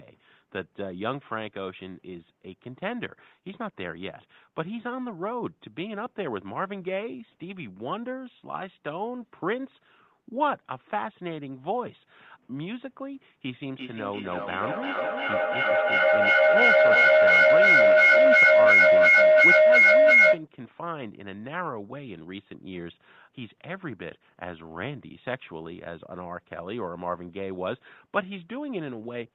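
From 13.76 s to 20.5 s there's a feedback howl. Two devices sharing one room loop mic to speaker, gaining level each trip, so it narrows to a tone near 700 Hz, pulsing roughly every 300 ms and peaking about 15 dB above the speech.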